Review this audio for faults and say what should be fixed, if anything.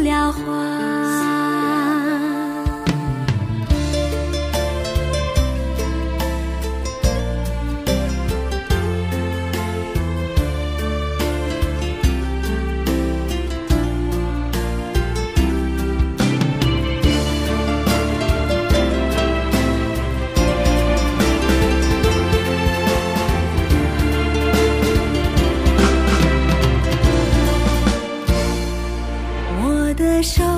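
From 20.46 s to 27.92 s the audio carries a doubled audio track: a second, full-band copy trails the original by about a third of a second at roughly the same level. It has no decay or room colouring, and it cuts in and out abruptly at those boundaries. The likely cause is the same signal being captured again through a slower path, or an edit leaving two copies out of alignment. To prevent it, route each source through one capture path and check edits for duplicated regions.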